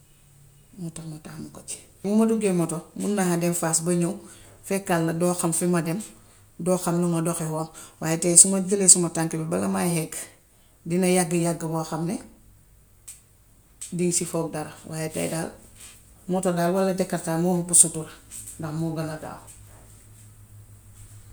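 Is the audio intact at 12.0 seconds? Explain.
Yes, at 12.0 seconds the speech plays through cleanly with no audible fault.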